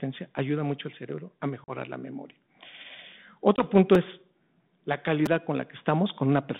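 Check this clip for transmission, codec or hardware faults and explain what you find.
Two kinds of fault are present in this speech, carried over what sounds like a G.726 ADPCM link, consistent with 32 kbit/s and limited to about 150 Hz to 3.6 kHz.

Packet loss on an ADPCM call occurs at 1.64 to 1.71 s, between "mucho al cerebro a" and "la memoria", and at 3.56 to 3.65 s. About two packets (40 ms) and then one packet (20 ms) were dropped and filled with silence. This leaves the decoder's predictor and step size mismatched, so each hard-edged gap is followed by briefly distorted speech.

A repeated buffer occurs at 3.95 s, just before "es la", and at 5.26 s, after "punto es la". When fresh audio arrived late, the last roughly 5 ms block was replayed once and then twice, producing a tiny click-like stutter.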